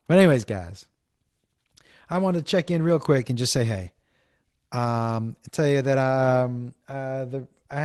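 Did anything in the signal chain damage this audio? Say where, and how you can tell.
No, nothing in the signal chain damaged this audio; the call path it went through left only the ordinary coding of a 24 kbps Opus link.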